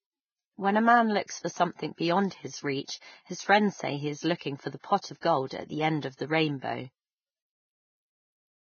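Throughout the clip the speech has the hissy, grainy texture of heavy Vorbis compression, likely from a very low bitrate around 14 kbps. Nothing is heard above about 6.6 kHz, and the treble that remains has been quantised so coarsely that fine detail has turned into noise of similar loudness, roughening the tone. This differs from simple low-pass filtering, which would sound dull but clean. Here the remaining band carries a gritty, smeared residue.

Pre-echo appears four times: at 4.37 s with a 39 ms spread, at 5.01 s with 27 ms, at 5.21 s with 26 ms, and at 5.47 s with 36 ms. At each point a short burst of hiss arrives just before a sharp onset. The codec spread the quantisation noise meant for the loud attack across the whole transform block, so it fills the quiet gap ahead of it, and the attack itself sounds softened. This pre-echo is distinct from an ordinary echo or reverb tail, because the smear comes before the sound rather than after it.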